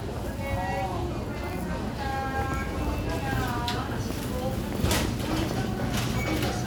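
At 1.53 s a single sharp snap sits on top of the sound, lasting only a couple of milliseconds and peaking fairly low, around -25 dBFS. This is an electrical switching spike, likely from a nearby switch or discharge arcing briefly and coupling into the audio line.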